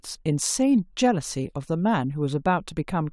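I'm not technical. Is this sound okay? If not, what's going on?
Yes, this speech recording sounds fine, with no technical problems anywhere in it. There is nothing here that needs fixing.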